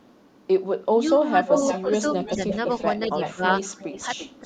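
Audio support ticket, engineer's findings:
Speech suppressed in double talk, 0.95–1.54 s: talker's speech dips by roughly 10 dB, about 0.3 s of it pulled down in pieces. Further short dips at 2.35–2.40 s and 3.07–3.12 s, about 5 dB each, and 3.35–3.43 s, deepest at about 20 dB. Likely the echo canceller's suppressor at one end, unable to tell near talk from loudspeaker echo while both sides spoke, attenuating everything.

Echo leak, 1.47–2.94 s, 3.18–3.33 s, and 3.61 s to the end: delayed copy of the speech trailing by 343 ms, about 10 dB under the direct voice, falling to about 20 dB under in the last stretch. Likely a loudspeaker-side echo canceller leaving residual mic pickup of the far-end playback, which is then returned down the line.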